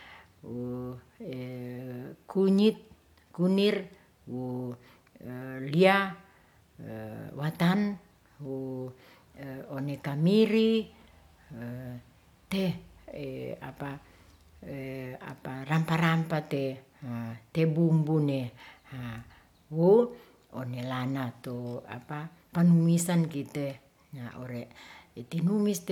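A speech recording, and nothing is technically wrong with it.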